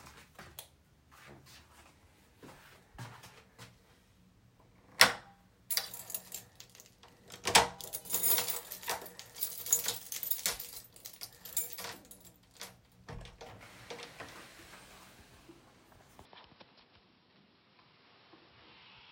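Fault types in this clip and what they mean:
Computer activity noise: processor or peripheral load disturbs the audio ground, adding a buzz pulsing about 500 times a second, roughly 30 dB down, from 7.46 to 10.61 s.
Input switched to a poorer device: likely a mid-recording change of input, so from 16.25 s the sound turns dull, with nothing above 5.5 kHz and a faint new noise floor.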